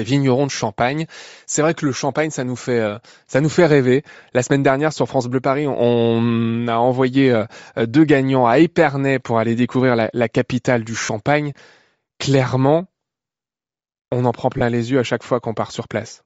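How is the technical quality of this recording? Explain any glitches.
The speech carries a plainly audible coding layer throughout, and there are two brief dropout glitches.

Across the whole clip the voice has a breathy, grainy edge, and the upper frequencies sound hollow and hissy rather than clear. This is likely Bluetooth LC3 compression, the transform codec used by LE Audio. At a low rate, consistent with roughly 32 kbps in 10 ms frames, the encoder discards much of the high-frequency detail and the decoder fills those gaps with noise. That substitution produces the rough sheen on the voice.

The two glitches are lost LE Audio frames. The first comes at 11.05 to 11.09 s, right after "découvrir la capitale du". The second runs from 14.58 to 14.61 s, between "on en prend" and "les yeux à chaque". Each is a short noisy smear lasting 40 ms and 30 ms, which fits four and three lost 10 ms frames. 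When frames fail to arrive, the decoder reuses the last spectrum it received with randomised signs. The voice briefly blurs into a noisy smear.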